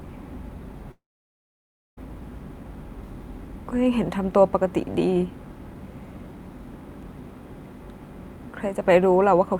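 At 0.91 s the speech breaks into a brief fading buzz or hiss, then near-silence until it resumes at 1.99 s, with about a second of talk simply gone. This is likely a long network dropout: packets stopped arriving, concealment faded out, and playback skipped the lost audio.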